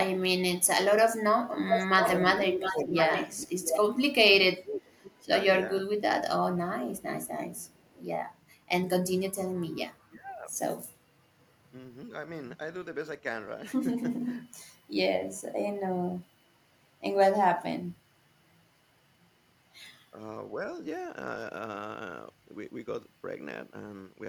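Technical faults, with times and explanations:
0.61–4.79 s, echo leak: a delayed copy of the voice trails by 686 ms at nearly the speech level, likely loudspeaker pickup the far-end echo canceller failed to remove.
2.36–7.98 s, speech suppressed in double talk: the voice dips by up to about 25 dB, roughly 1.5 s in all, likely because the canceller ducked it while both sides talked.
7.57–7.89 s, echo leak: a very faint residual copy of the voice, again 686 ms behind, likely echo the canceller left behind.
10.06–10.52 s, speech suppressed in double talk: the voice drops by about 20 dB for roughly half a second, likely the canceller attenuating overlapping talk.
16.19–16.23 s, speech suppressed in double talk: a brief dip of about 15 dB, likely the canceller momentarily clamping during overlap.
18.57–18.71 s, background gated by the echo canceller: room sound falls by about 11 dB for roughly 150 ms while the loudspeaker plays, then recovers when the canceller releases.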